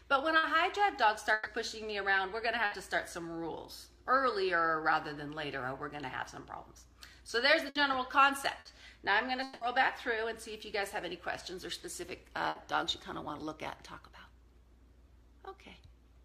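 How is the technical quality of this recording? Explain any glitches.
The recording has repeated transmission damage: six short bursts of packet loss and one longer break.

Bursts of packet loss occur at 0.37, 1.33, 2.65, 7.69, 8.59 and 12.49 s. Each lasts about 90 ms, except the one at 1.33 s, which runs to about 150 ms. Consecutive packets never arrived, so the receiver stretched the last sound for about 60 ms (about 120 ms at 1.33 s) while turning it down. The result is a brief buzz or hiss, then the audio jumps ahead with material missing. On a spectrogram, each burst appears as a short smear of repeated harmonics that fades out, followed by an abrupt change in spectral content.

From 9.43 to 9.64 s there is a longer gap, most likely a long network dropout. For about 180 ms the last sound is continued as a fading buzz or hiss, and the audio resumes at a later point without ever dropping to full silence. 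On a waveform it looks like a repetitive, decaying stretch that ends with a discontinuity. A spectrogram shows frozen, blurred bands that dim before the content resumes.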